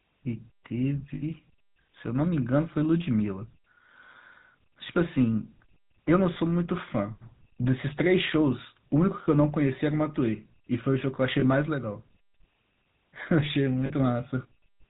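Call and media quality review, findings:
GSM full-rate codec, whole clip: speech passed through a vocal-tract model driven by regular pulse excitation, every third excitation sample kept, which fits a 13 kbps full-rate GSM path. Nothing above 4 kHz; plainly audible buzzy, gravelly roughness throughout.

Lost GSM frames at 1.14–1.23 s (80 ms), 6.34–6.37 s (20 ms), 11.40–11.44 s (20 ms), 13.86–13.92 s (40 ms): decoder concealment repeated the last good frame's parameters. Each gap is heard as a brief rough, metallic ring, longest at 1.14 s.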